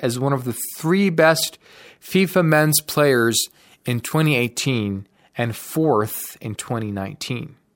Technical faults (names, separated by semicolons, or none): pre-emphasis left on